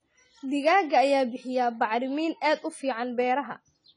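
From start to finish the speech sounds dull and smeared, with nothing above 10 kHz and a fizzy, warbling texture on sustained sounds and sibilants. The damage is plainly audible. This is likely AAC compression, AAC-LC at a low bitrate, which fits something near 24 kbps. Short of bits, the encoder lowered its cut-off and quantised the remaining frequency lines coarsely against its hearing model, smearing across each frame.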